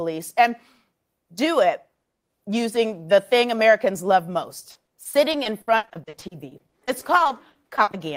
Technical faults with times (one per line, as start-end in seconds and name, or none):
4.71-7.95 repeated packet loss (robotic sound)